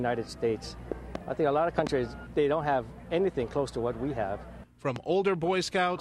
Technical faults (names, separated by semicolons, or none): loud pop